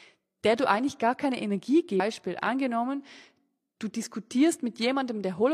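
A speech clip with one fault. At 1.95 to 2.00 s, damaged data in the compressed stream causes a brief glitch. Corrupted bytes there made the decoder misread or refuse those frames and lose sync. It then searched for the next valid frame header before resuming.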